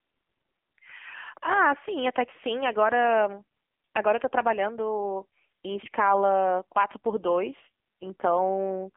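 From start to finish the speech carries heavy AMR narrowband mobile codec damage. Everything sits inside a telephone band of roughly 200 Hz to 3.4 kHz, and nothing passes above 3.5 kHz, so the voice sounds boxed-in and thin. The codec rebuilds speech from a vocal-tract model excited by sparse pulses, and at this low rate, which fits a mode near 6.7 kbps, the result turns buzzy and synthetic. On a spectrogram the energy stops at a hard ceiling near 3.5 kHz, with smeared, blocky harmonics below it.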